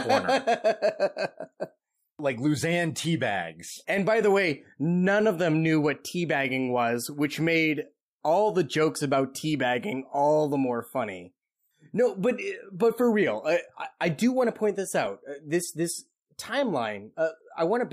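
Speech with a brief glitch at 15.06 s, just after "want to point this": for about 7.5 ms the sound turns into a noisy smear. These are lost LE Audio frames, likely a single dropped LC3 frame. The decoder filled the gap by repeating the previous spectrum with randomised phase.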